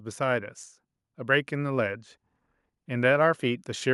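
Speech recording with no audible technical faults anywhere in the clip.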